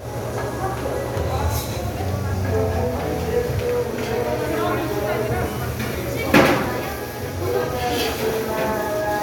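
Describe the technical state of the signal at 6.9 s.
At 6.9 s the audio is intact, with no fault of any kind present at that moment.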